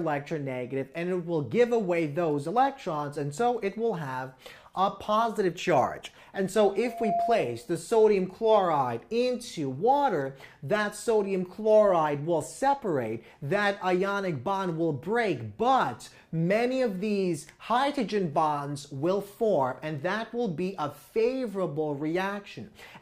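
A steady tone near 689 Hz swells up over roughly a third of a second at 6.82 s and rings until 7.67 s, reaching about the level of the surrounding audio. This is loudspeaker feedback squeal: the microphone re-amplified its own loudspeaker until that frequency ran away.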